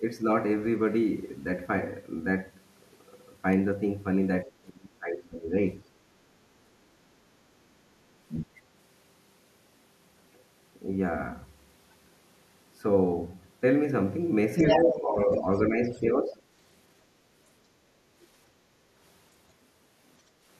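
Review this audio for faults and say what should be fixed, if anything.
The speech suppressed in double talk happens at 4.45 to 5.53 s, dipping by roughly 25 dB, then at 14.8 to 15.46 s and 15.69 to 16.39 s, each around 10 dB down. This is likely the echo canceller mistaking overlapping talk for echo and turning everything down.

The other side's voice leaks through at 8.29 to 8.61 s, 14.56 to 14.96 s, 15.32 to 15.6 s and 15.94 to 16.01 s. It ranges from faint to actually louder than the talker near 14.6 s, which points to the canceller likely leaving residual loudspeaker echo in the mic signal.

The background is gated by the echo canceller at 18.59 to 18.92 s, where the room sound drops by about 6 dB for roughly a third of a second while the loudspeaker plays, then comes back when the canceller releases.

A better double-talk detector, plus a quieter speaker or a headset on the talker's end, should keep the canceller from both over-suppressing and under-cancelling.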